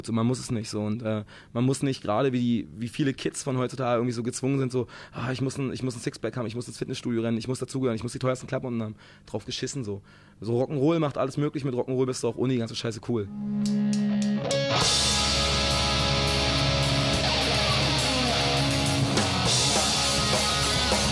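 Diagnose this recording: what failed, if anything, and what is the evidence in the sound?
No fault can be heard.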